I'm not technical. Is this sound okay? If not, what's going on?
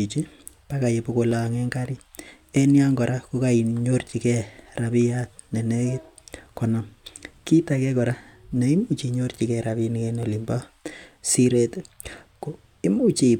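No, not quite. You'll hear three quick, sharp clicks in the speech, at about 1.32, 2.57 and 10.23 seconds. Each one is most likely dropped samples: a tiny sliver of audio, under a thousandth of a second, went missing, so the sound jumps abruptly from one point to a slightly later one. That sudden jump is what makes the click. Nothing you'd notice as missing sound, just those three little ticks.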